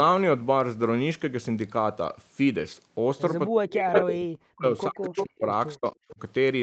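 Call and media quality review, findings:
Speech suppressed in double talk: level ducks or cuts out at 3.51–5.42 s (down about 40 dB), 5.77–5.94 s (about 40 dB) and 6.11–6.19 s (about 20 dB). Likely echo canceller attenuating both talkers. It is gain ducking, not packet-loss gaps or concealment artefacts.

Echo leak: delayed copy of the voice trailing by 325 ms at 3.94–4.08 s (near speech level) and 5.16–5.39 s (about 5 dB lower). Likely residual loudspeaker echo passing the canceller. It is a fixed-delay repeat, not a reverb tail.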